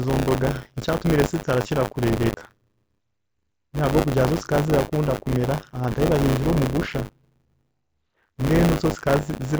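Buffer tearing runs through the whole recording: a steady robotic buzz at 100 Hz, which fits a 10 ms buffer period, present only while speech sounds. The writer and reader have slipped, so a small slice of each period, around a seventh, replays audio roughly 40 ms old, with hard joins either side.

From 2.25 to 2.46 s there is concealed Bluetooth headset packet loss: about 128 ms of audio went missing across 210 ms, the longest gap 45 ms. The receiver filled each hole by repeating recent waveform, giving a buzzy sustained tone at full level and a slight warble as real audio resumes, over the wideband mSBC link.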